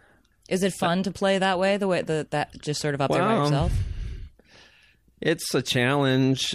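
No technical faults can be heard in the speech.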